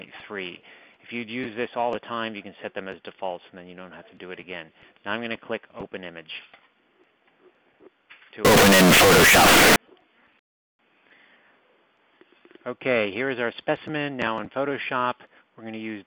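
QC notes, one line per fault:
8.45–9.76 s, float read as integer: 32-bit float samples were likely decoded as 32-bit integers, so sign and exponent bits dictate level. The waveform jumps to a near-square shape at an almost fixed, high level, suddenly very loud and harsh, with background noise as loud as the sound itself, though pitch stays traceable.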